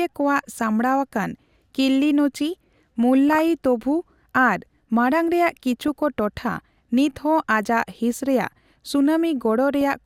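Speech with DAB burbling at 3.29–3.41 s, 5.83–5.88 s and 9.81 s: a fraction of a percent of bit errors corrupts sub-band levels, showing as isolated bright spectrogram blocks and short noise blips.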